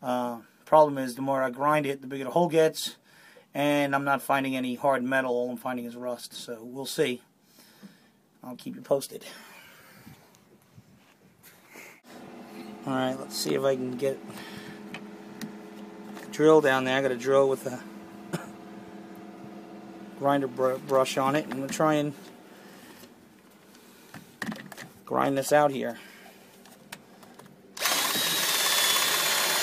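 No technical faults are audible.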